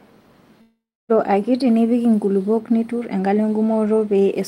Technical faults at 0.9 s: long network dropout

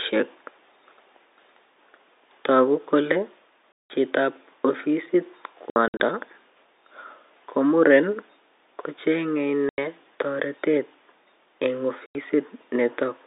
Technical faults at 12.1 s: packet loss filled with silence

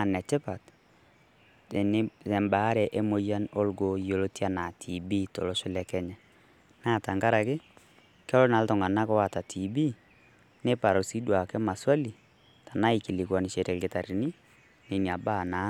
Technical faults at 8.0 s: none

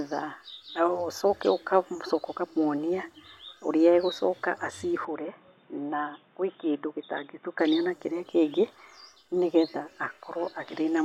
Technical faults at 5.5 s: input switched to a poorer device

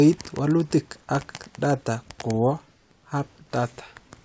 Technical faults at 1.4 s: none

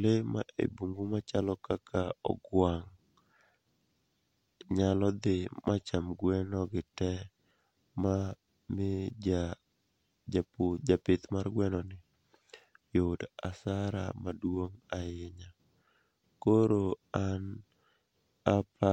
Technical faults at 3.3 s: none

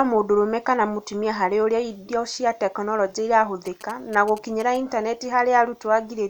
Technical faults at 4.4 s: GSM signalling bursts

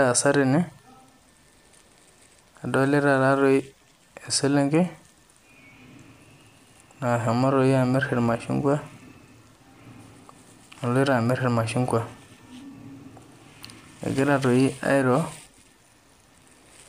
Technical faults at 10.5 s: none

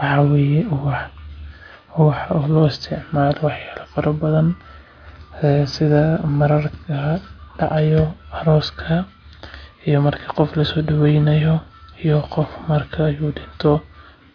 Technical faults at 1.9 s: none

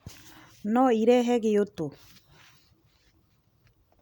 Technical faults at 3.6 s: none

